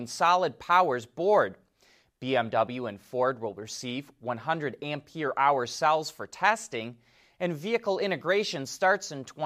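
Nothing stood out as technically wrong on listening to this speech recording.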